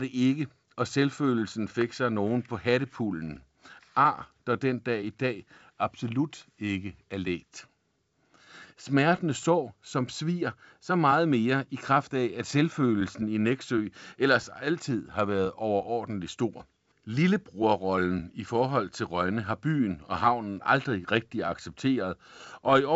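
No faults are audible here.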